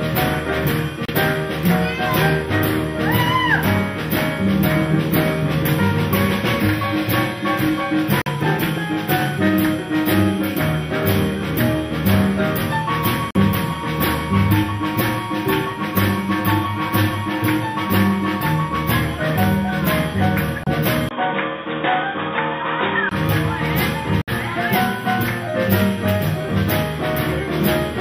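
The first gap comes at 1.05 s, and the same thing happens at 8.22, 13.31, 20.64 and 24.22 s. Each time the sound cuts out for roughly 30 to 60 ms, with the longest at 24.22 s, then picks up further along as if it had kept playing underneath. That pattern points to a likely Bluetooth dropout, where packets miss their deadline on the way to the headphones and the output just goes quiet. The lengths fit two to four lost codec frames per hole.

At 21.09 s there's a short silence of about 20 ms. After it the sound goes dull and boxy, with nothing left above 3.8 kHz and a new noise floor sitting around 30 dB below the signal. The loudness stays about the same. It recovers at 23.11 s. That's most likely the input switched to a poorer device, such as a headset's call profile or another mic with a narrower band, and then switched back.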